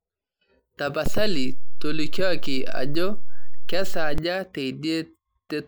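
At 1.06 s a DC step shifts the waveform's zero line by about -15 dBFS, heard as a low thump. It lasts until 4.18 s. The speech continues unchanged.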